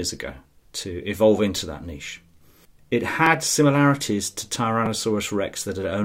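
Speech with repeated buffer faults at 1.57 s (between "ago to evolve" and "that niche"), 3.26 s (before "similarities to") and 4.86 s (after "similarities to"). A roughly 5.3 ms chunk, which fits a 256-sample buffer, replays two, one and two extra times, producing brief clicky buzzes. The waveform shows identical repeating segments with hard joins, and the spectrogram shows thin vertical streaks.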